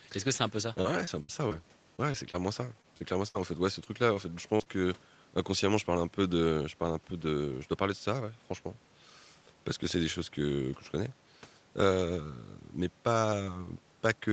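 From 0.81 to 4.68 s, repeated packet loss hits the call stream: more than a dozen short holes, the longest about 63 ms, are patched by stretching the preceding sound. The speech turns choppy and robotic, with small pieces missing.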